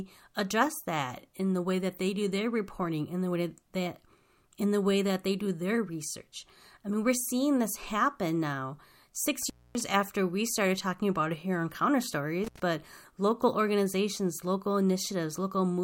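Speech that breaks up twice with crackle at the edges, from 9.43 to 9.81 s before "after we started talking" (a gap of about 0.25 s) and from 12.44 to 12.60 s before "local organizations local" (about 75 ms). This is intermittent contact, where a loose cable or plug opened briefly.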